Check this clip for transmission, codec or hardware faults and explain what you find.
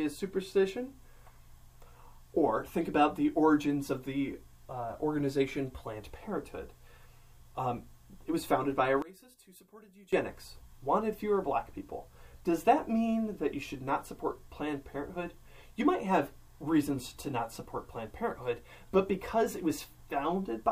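One fault stands out. From 9.02 to 10.13 s the sound drops by about 21 dB, likely from one channel inverted cancelling the shared content in a mono sum; the waveform shrinks sharply and the spectrogram fades.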